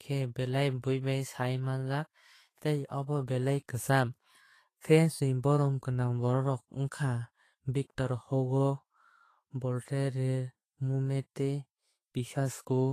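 Vorbis compression is likely throughout, at a bitrate near 32 kbps, quantising the treble coarsely and cutting everything above 14.2 kHz, so the speech sounds grainy and hissy.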